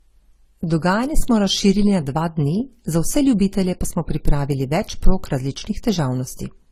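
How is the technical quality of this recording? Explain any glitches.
The speech is degraded by stacked codec artefacts throughout. This is likely transcoding between lossy codecs, consistent with AAC-LC at 32 kbit/s re-encoded as Opus at 48 kbit/s. The first codec's smearing persists, Opus adds its own coarseness, and nothing remains above 15.7 kHz.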